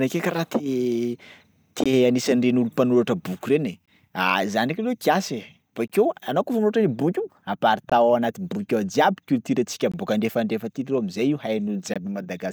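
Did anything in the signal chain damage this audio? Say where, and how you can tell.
Yes. There's a gap between chunks, most likely at the buffering or playback stage where the audio was handled in 2-second blocks. You hear six 20 ms holes in the speech, at 1.84–1.86, 3.86–3.88, 5.88–5.90, 7.90–7.92, 9.92–9.94 (just before "bôka andrefandrefa aty") and 11.94–11.96 s. Each block plays through intact, then a bit of silence gets dropped in before the next one starts. That steady 2 s rhythm is what gives it away.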